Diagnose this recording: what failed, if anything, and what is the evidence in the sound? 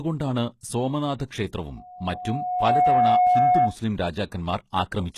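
The audio has a plainly audible codec fault throughout, with nothing above about 12.3 kHz, and its treble sounds synthetic, gritty and metallic rather than simply dull. That points to the codec stage, likely HE-AAC at a low bitrate, which fits about 16 kbps. Spectral band replication copies lower bands upward, so the harmonics across the crossover don't line up. A plain low-pass would instead leave the top end cleanly missing.

At 1.18 s a short hiss of about 17 ms comes just before a sharp attack, which sounds softened. This is pre-echo from the transform codec. Quantisation noise sized for the loud attack is spread across the whole block, including the quiet moment before it. Reverb or a smeared echo would trail after the attack, not lead it.

From 1.76 s to 3.76 s there is a loudspeaker feedback squeal: a single 726 Hz tone that swells over about a second to roughly 10 dB above the speech. 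This is an acoustic loop in the analogue chain, where the microphone hears the loudspeaker and loop gain exceeds one at that frequency. Unlike hum or a fixed test tone, it builds up by itself.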